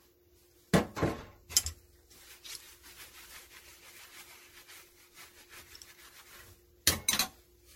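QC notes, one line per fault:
Throughout: generation loss. The sound is swirly, smeared and hollow, with blurred attacks and nothing above 16.5 kHz. This likely comes from around seven successive low-rate MP3 re-encodes, consistent with roughly 60 kbit/s, each requantising on a shifted frame grid and compounding noise and spectral holes.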